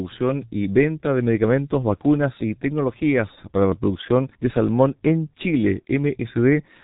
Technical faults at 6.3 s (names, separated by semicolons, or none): G.723.1 codec